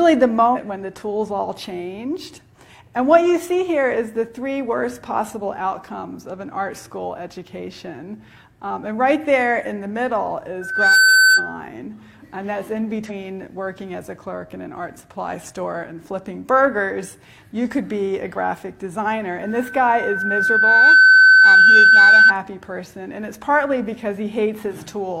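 Compressed frames skipped at 0.51–0.57 s, 11.34–11.40 s and 13.05–13.11 s: the decoder drops whole damaged or missing frames, so the audio leaps ahead, by roughly a fifth of a second first and a tenth later. Loudspeaker feedback squeal at 10.61–11.62 s and 19.43–22.35 s: the microphone re-amplifies its own loudspeaker until a 1.5 kHz tone runs away, swelling within a fraction of a second and then over a second or so, ending roughly 10 and 15 dB above the sound.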